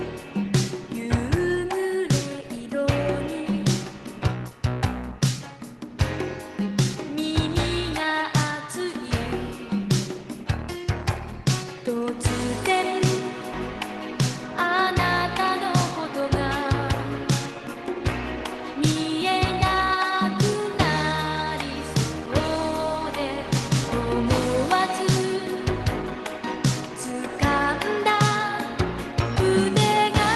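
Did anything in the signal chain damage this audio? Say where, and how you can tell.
Yes. At 13.53 s the network and jitter-buffer stage of the call path produced a skip ahead. A stretch of roughly 400 ms of audio was thrown away, lost in transit or dropped when the buffer overflowed. Playback was therefore pulled forward by the same amount. The two edges of the missing stretch are butted together with no fill, so the sound lurches abruptly forward, over the band-limited Opus-style coding of the call path that tops out near 12 kHz.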